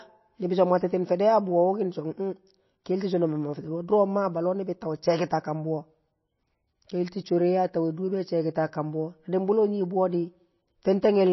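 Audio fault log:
Throughout: MP3 compression. The speech has nothing above 5.8 kHz and plainly audible codec damage, a watery, swirling texture, likely from a low-bitrate MP3 encode around 25 kbps, where starved frequency lines drop in and out between frames and the treble is cut off.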